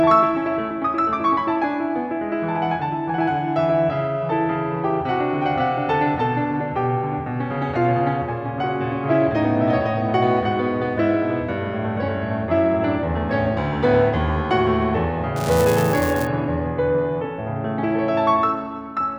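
From 15.36 to 16.27 s the music carries buffer tearing. Writer and reader of the ring buffer have slipped and cross each period. A small slice, roughly one or two percent, replays audio about 7 ms old. Hard joins produce a steady 375 Hz buzz, fitting a 128-sample buffer.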